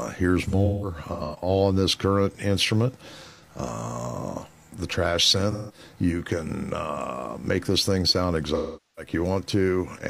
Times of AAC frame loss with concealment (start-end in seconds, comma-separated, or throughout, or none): 0.47-1.49, 3.29-3.42, 5.51-5.79, 8.54-9.12